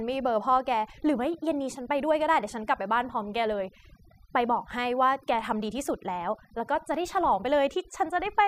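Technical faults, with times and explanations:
Throughout: overdone noise removal. Noise reduction was pushed too hard on this speech. Individual frequency bands near the noise estimate are cut almost to nothing, and quieter parts of the voice go with them. Between phrases the background drops and breaks up into twinkling specks.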